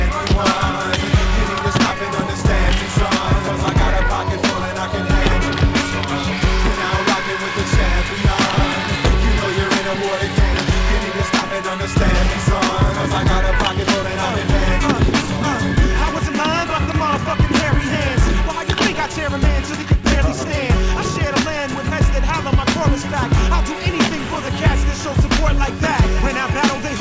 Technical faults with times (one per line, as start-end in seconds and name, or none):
10.54 skip ahead
13.55-14.81 jitter buffer speed-up
15.24-20.45 jitter buffer speed-up